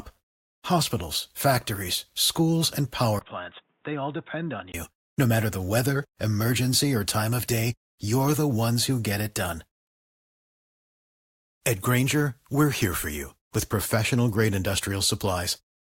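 At 3.19 s, right after "factories schools and", the speech suddenly turns dull and boxy. A gap of about 20 ms marks the change. Nothing above 3.8 kHz gets through until 4.74 s. The level drops by roughly 10 dB. A new background noise sits well under the speech, at a fairly low level. This is likely an input switched to a poorer device. A narrower-band device took over briefly, bringing its own tone, level and noise floor.

At 9.87 s, just after "who get it done", the sound cuts to silence. It resumes at 11.61 s, exactly where it stopped. This is a rebuffering stall. The player ran out of downloaded audio and waited for more to arrive. Nothing is missing from the speech. The stall simply adds 1.74 s of dead air to the clip.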